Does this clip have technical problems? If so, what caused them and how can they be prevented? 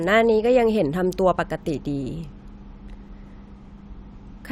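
No, nothing in this recording points to a technical problem.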